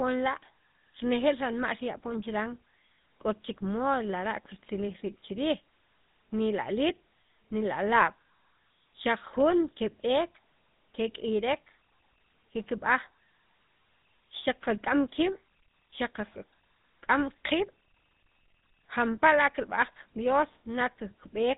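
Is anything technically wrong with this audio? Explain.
Yes. Throughout the clip, the speech carries GSM full-rate codec damage. The codec models the vocal tract and drives it with a sparse, regularly spaced pulse excitation, at a rate that fits 13 kbps. That gives a plainly audible buzzy, gravelly roughness, and nothing survives above 3.8 kHz.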